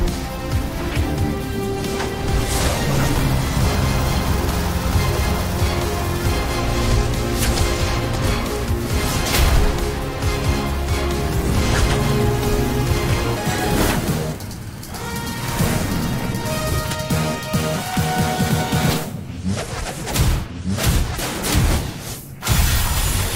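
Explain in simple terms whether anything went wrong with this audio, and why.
From 13.36 s to the end, the audio suddenly plays at 1.78 times its proper speed, a section at the wrong speed, likely from playback on a mismatched clock. Everything turns hurried and nearly an octave higher at once, unlike a pitch change alone, where timing stays normal.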